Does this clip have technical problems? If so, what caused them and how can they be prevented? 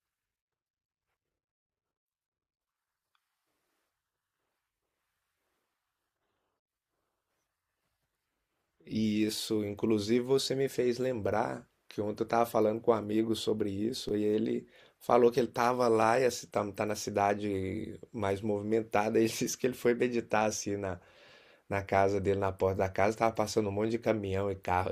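Yes. At 14.09 s the zero line of the waveform jumps, a DC step of about -33 dBFS, the kind of sudden offset that appears when a converter recalibrates or an input carrying its own offset is switched into the chain. The offset then drains away as a 20 Hz high-pass pulls the signal back toward zero, so the step is heard as a single low thump under the speech, which carries on unchanged through it. To prevent it, avoid switching or recalibrating inputs mid-recording and block DC ahead of the converter so no offset can reach the signal.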